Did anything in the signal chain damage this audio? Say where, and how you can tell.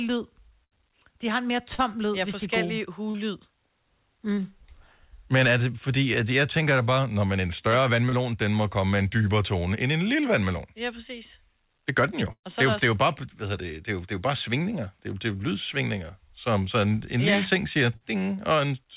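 Yes. The damage happened at the network and jitter-buffer stage of the call, where late or lost packets were concealed by the receiver. The audio is band-limited at 4 kHz, which fits a narrowband G.711 A-law call path.

Scattered short gaps run from 0.64 to 4.40 s: about four separate holes, the longest around 70 ms, adding up to roughly 200 ms of missing audio. About 150 ms of that was filled by extending the preceding sound, so you hear isolated ticks and brief smears spread across the stretch. A single dropout or a steady codec artefact would not produce that; the loss is several independent packets over nearly four seconds.

Short concealed packet loss occurs twice. The first is at 8.09 to 8.15 s, between "når man en større" and "den må komme med". The second is at 17.96 to 18.04 s, just after "ting siger". Each loses about 40 ms, mostly patched by continuing the last pitch or noise and then crossfading back. 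The result is a single quick wobble. Unlike a burst, it is short, and unlike the scattered gaps, each is a lone event.

A burst of packet loss starts at 12.32 s, right after "gør den jo", and runs to 12.46 s. About 120 ms is missing. The concealment holds the previous sound for roughly 110 ms while fading it, and about 70 ms goes silent before the audio resumes further along. The held, decaying sound followed by a jump is what separates it from the brief smears of short concealed loss.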